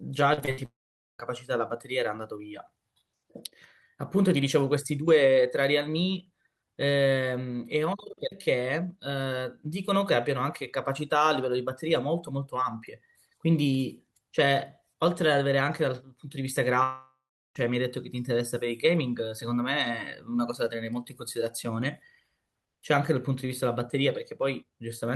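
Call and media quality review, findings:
Repeated packet loss (robotic sound), 0.33–0.59 s: choppy stretch with four short holes, the longest 62 ms, patched by extending the preceding sound. About half the span is synthesized. Network path and receiver packet-loss concealment.

Long network dropout, 0.65–1.21 s: sound stretches into a fading buzz, then about 0.47 s of silence, and resumes with roughly 0.54 s lost. Likely a network outage, with concealment running out.

Long network dropout, 16.83–17.57 s: same pattern. Fading buzz, about 0.37 s silent, about 0.72 s of audio never played. Likely the network path stalled.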